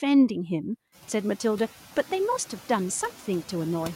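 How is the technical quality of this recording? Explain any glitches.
The recording has one processing fault, noise suppressor artifacts, present from start to finish. A noise suppressor removes, frame by frame, whatever it judges to be steady background. Here it takes only about 4 dB off that noise, so the cut is shallow. The background, which climbs by about 15 dB around one second in and then sits about 20 dB below the speech, dips slightly in the gaps and comes back up under each phrase. A noise gate would instead shut the background off completely between phrases; this light, continuous pumping points to a suppressor.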